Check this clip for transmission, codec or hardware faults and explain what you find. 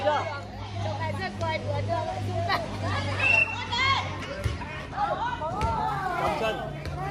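One fault appears near the end. From 5.88 s to 7.10 s there is crude rate conversion. Samples are simply repeated to raise the rate, which fits a 44.1 to 48 kHz step with no filtering. The resulting error, roughly 30 dB down, adds a gritty, inharmonic fizz that tracks loud and high sounds.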